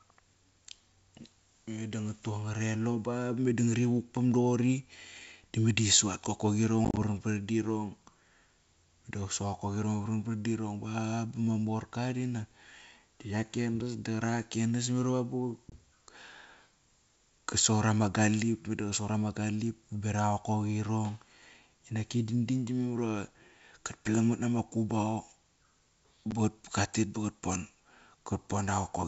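Packet loss on an ADPCM call shows up at 6.85 to 6.98 s (about 70 ms of gaps scattered, longest 30 ms), at 15.70 to 15.75 s, and at 26.31 s. The silent holes knock the decoder's predictor out of step, so sound resumes slightly distorted. All of this sits on wideband G.722, which sounds like the full-rate version.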